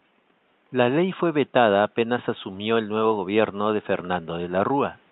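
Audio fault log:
No audio fault to log for this speech clip.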